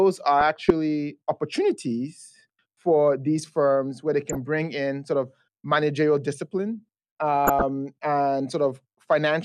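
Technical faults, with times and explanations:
0.40–0.70 s (before "opportunities for these firms"), 4.29–4.36 s (between "these firms where they" and "bring in sort of"), 7.45–7.63 s: DAB burbling. Weak reception lets bit errors through, so individual sub-bands get short blips of noise or jump in level for up to a frame, giving burbling over the speech instead of a clean dropout or gap.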